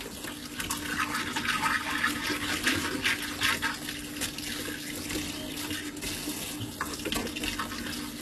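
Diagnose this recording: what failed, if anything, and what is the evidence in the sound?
The codec stage is at fault: the damage is plainly audible from start to finish, and the sound is most likely HE-AAC compression at a very low bitrate, around 16 kbps. The treble stays bright but rings gritty and metallic, because it has been rebuilt by copying lower bands upward rather than coded directly. On a spectrogram, the upper region shows repeated, smeared blocks of texture whose harmonics don't align with those below, with nothing at all above 12.3 kHz.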